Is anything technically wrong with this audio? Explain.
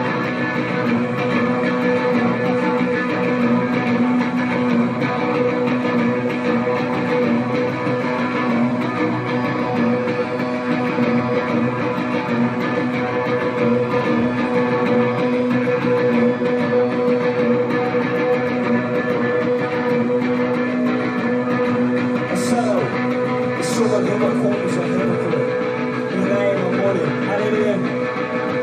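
No, nothing technically wrong turns up here; the audio runs without any glitches or problems worth pointing out.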